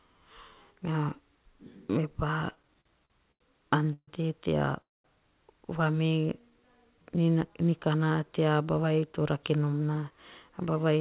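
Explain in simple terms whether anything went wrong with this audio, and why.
Yes, several things went wrong, all from the call's delivery rather than the recording itself.

Repeated stalls (stutter), 2.5 to 3.42 s: the sound catches eight times in under a second. Each time packets arrived late, the receiver drew out the last bit of sound to cover the wait. The longest catch is 86 ms, and together they cover 222 ms, about a quarter of that stretch. Nothing is lost, but the speech drags and jerks.

Call audio freeze, at 3.93 to 4.09 s and 4.81 to 5.06 s: the speech stops, a brief buzz fades out, then it picks up exactly where it left off. The first freeze lasts 144 ms, 60 ms of it silent. The second lasts 228 ms, nearly all silent (210 ms). The likely cause is packets held up in transit, emptying the receiver's buffer. The gaps add delay, and no speech is skipped.

Jitter buffer slow-down, 6.03 to 7.04 s: the speech runs at 88% speed with its pitch unchanged, sounding slightly stretched. 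To rebuild its reserve, the receiver repeated tiny slices of the voice many times, adding 128 ms in total.

Jitter buffer speed-up, 8.74 to 10.98 s: the speech runs at 109% speed at the same pitch, so it sounds a little hurried. The receiver had built up too much delay and trimmed tiny slices out to catch up, removing roughly a fifth of a second overall.

Throughout, the audio has the muffled telephone sound of the G.711 call codec, with nothing above 4 kHz.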